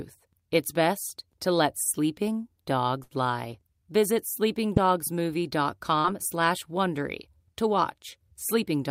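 At 3.03 to 3.13 s, just after "best to let sleeping", a burst of packet loss drops about 80 ms: the last sound is held and fades before the audio jumps ahead. Short concealed packet loss at 4.75 to 4.78 s and 6.00 to 6.06 s leaves brief smears where the spectrogram blurs.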